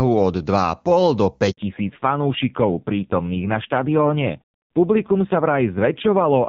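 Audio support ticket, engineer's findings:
Handover gap: audio drops out at 1.51 s and stays silent for 60 ms until 1.57 s. Network handover, no speech frames delivered during the switch, content lost.

Fallback to narrowband: from 1.57 s to the end, nothing above 4 kHz and the sound turns duller. Call fell from wideband to a narrowband codec, consistent with AMR-NB at a low rate. Before 1.51 s the AMR wideband path is clean.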